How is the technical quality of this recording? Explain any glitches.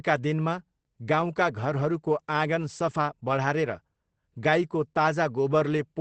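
The recording is limited by Opus voice compression that runs through the entire clip and is plainly audible. The coder is in its wideband linear-prediction mode, which models the speech rather than preserving the waveform. At a low rate, apparently around 12 kbps, the excitation is coded coarsely, so the speech sounds muffled, hoarse and faintly robotic. On a spectrogram, energy stops sharply near 8.4 kHz with nothing above, and harmonics look smeared rather than crisp.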